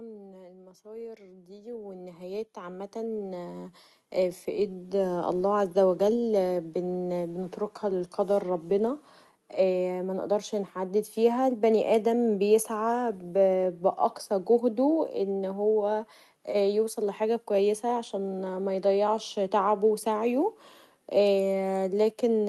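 Right at the start of this speech clip you get automatic gain falling: from 0.05 to 0.77 s the input is too loud or too noisy for the gain control, which reacts by pulling itself down about 4 dB, so the voice and its background sink together over those first moments. Then it swings the other way, with automatic gain rising from 0.82 to 7.53 s. The control decides the input's too quiet and creeps its gain up about 19 dB, so everything, room noise included, slowly swells over nearly seven seconds. Underneath it all there's a call-codec sound, with the top end stopping around 12 kHz.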